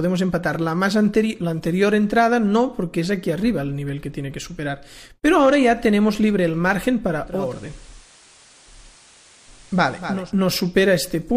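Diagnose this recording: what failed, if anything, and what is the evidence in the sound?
The failure is at the radio reception stage: digital radio blending to analogue. From 7.24 s to 10.33 s the receiver cross-fades over about 360 ms to the FM signal. Hiss rises to roughly 30 dB below the audio, and level stays unchanged.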